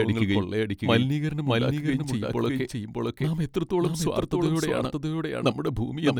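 A doubled audio track runs throughout the speech: a second full-band copy trails the original by roughly 0.7 s, about 5 dB quieter, with no decay or room colour. It likely comes from the signal being captured twice, once through a slower path.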